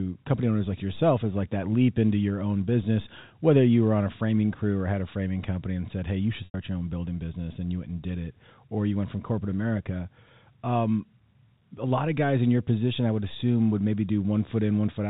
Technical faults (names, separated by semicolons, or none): packet loss with pitch repetition